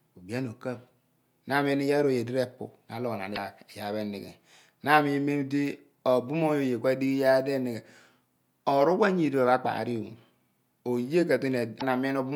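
At 3.33 to 3.38 s, and again at 11.77 to 11.83 s, the speech breaks into a brief chirp, squawk, click or short hole lasting about 0.05 s. Both are damaged data in a compressed stream. Corrupt bytes confuse the decoder, which loses frame sync and hunts for the next header.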